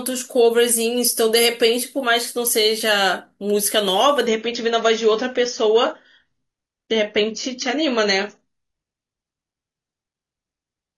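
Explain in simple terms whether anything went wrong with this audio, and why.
At 4.27 s the speech suddenly turns duller until the end, with nothing above about 6.9 kHz. That is an adaptive stream at a lower bitrate: the connection slowed, so a poorer copy took over. Unlike a dropout, the sound never gaps.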